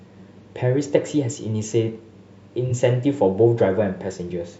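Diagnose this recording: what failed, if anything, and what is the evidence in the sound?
The failure is in the codec stage: AAC frame loss with concealment. From 2.66 to 2.72 s the speech turns briefly smeared and noisy for about 43 ms, which fits a single lost AAC frame that the decoder filled by reusing the previous spectrum with randomised phase.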